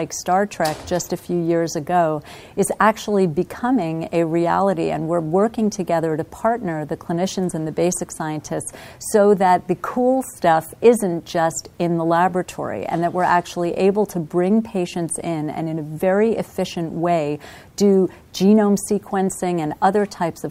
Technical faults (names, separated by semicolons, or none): none